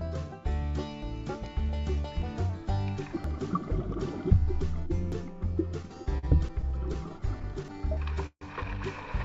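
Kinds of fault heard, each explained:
Dropped buffer (overrun): Seven sudden jumps forward in the sound with no silence between, about 100 to 150 ms skipped each time. The likely cause is samples not being collected before the hardware overwrote them.
Repeated stalls (stutter): From 5.69 to 8.43 s the sound drags and stutters through 23 brief holds, the longest about 150 ms, 420 ms filled in all with nothing missing. Late packets kept emptying the jitter buffer, so the receiver extended the last sound each time.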